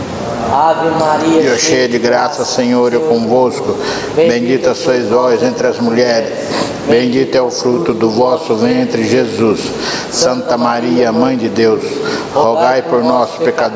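Throughout, the gain swings by around 20 dB, bringing loud and soft parts closer in level and squashing the sound. This is gain pumping, likely excessive microphone gain driving a fast limiter.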